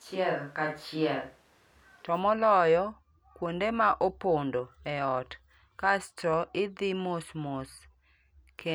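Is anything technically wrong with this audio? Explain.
Yes. From the very start of the speech until about 2.04 s, there is a switch to a distant microphone, most likely because the close microphone's signal was missing and a far-off pickup was used instead. The voice sounds roomy and hollow, with thin bass and a faint bed of room noise well beneath it, then turns close and full abruptly at 2.04 s. On a spectrogram, that opening stretch shows weaker low frequencies and smeared, reverberant tails between syllables. The waveform's overall level barely changes at the cut.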